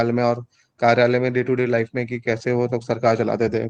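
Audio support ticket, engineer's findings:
Brief rough, grainy patch in the speech at 1.57–1.59 s, about 20 ms, with no dropout or silence. Component: Opus decoder, receive path. Lost packet rebuilt from error correction: sounds like a single packet went missing, and the decoder filled the gap with the lower-bitrate in-band FEC copy carried in the next packet. Hence continuity is kept but the quality is coarser and noisier for that frame.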